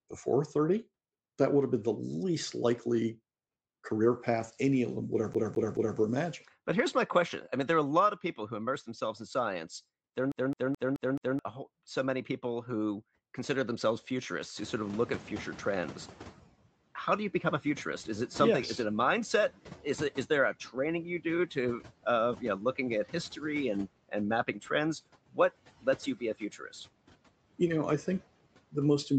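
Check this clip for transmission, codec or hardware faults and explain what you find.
Three faults are present: noise suppressor artifacts, a CD stuck on one turn, and a noise suppressor catching up.

Noise suppressor artifacts run throughout the speech. Frame-by-frame band gating cuts the noise by about 17 dB.

A CD stuck on one turn appears at 5.34 to 5.98 s and 10.32 to 11.39 s. A scratch throws the laser back, repeating a 215 ms slice three times, then five times. Each jump has a short mute, making an even stutter.

The noise suppressor is catching up from 14.56 to 16.51 s. The room noise jumps by about 25 dB near 14.5 s. The suppressor's noise estimate lags, so the noise breaks through. Over 1.95 s it sinks to about 11 dB of reduction.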